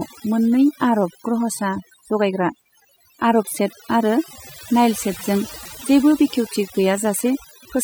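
Throughout the speech, overdone noise removal cuts frequency bands near the noise estimate, leaving a lowered background with twinkling specks. At 5.65 s, a repeated buffer of about 1.45 ms, which fits a 64-sample buffer, plays three extra times, producing a click or brief buzz and losing a few milliseconds of audio.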